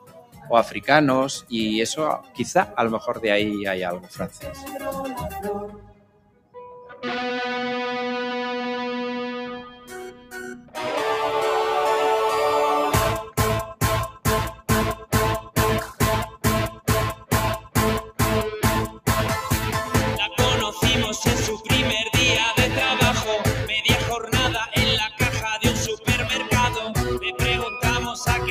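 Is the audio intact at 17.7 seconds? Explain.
No. Sound cut by the noise suppressor runs from 13.23 to 19.07 s, covering 17.7 s. The suppressor treats the steady or fading sound as noise and pulls it down by up to about 16 dB, sinking sustained parts and shortening decays for roughly two seconds in total.

Underneath this, a noise suppressor applied to music or sounds acts across the whole clip. Built for speech, it keeps mistaking held tones, ambience and reverb for noise, so the level swings by around 10 dB around 17.7 s.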